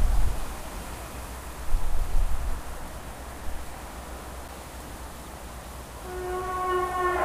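At 4.48 s there is a CD skip. The laser jumped to another turn of the disc's spiral. A brief mute of a few milliseconds gives a tick, then the sound resumes from elsewhere.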